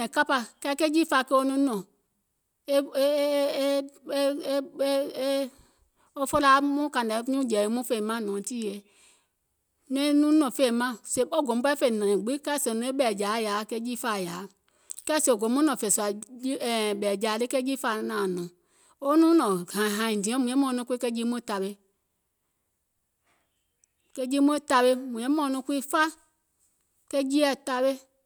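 No technical faults can be heard anywhere in the speech. There is nothing to mark at any point in the recording.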